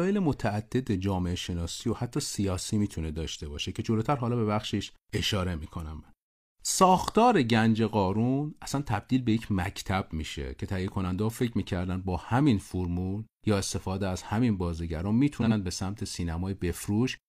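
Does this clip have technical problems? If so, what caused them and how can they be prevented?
Yes. Frames out of order occur at 15.41 to 15.52 s in this speech. Two neighbouring blocks of 46.4 ms each, consistent with one coded frame apiece, were delivered and decoded in swapped order, so the stretch plays with its halves exchanged. The result is a brief garbled flutter, and no time is lost overall. Prevent it by using sequence numbers and a jitter buffer that reorders frames before decoding.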